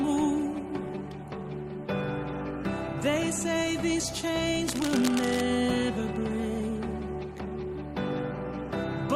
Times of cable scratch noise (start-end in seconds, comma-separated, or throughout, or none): 4.68-5.41